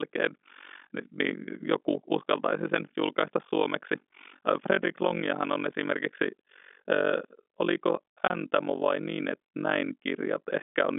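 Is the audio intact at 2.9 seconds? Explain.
No. At 2.9 seconds, as throughout the speech, overlap-add ripple is present: frames were rejoined with a gain that doesn't sum evenly, so the level dips by about 60 dB around 50 times a second. This is a pulsing of the speech itself, not an added hum, and is separate from the normal telephone bandwidth.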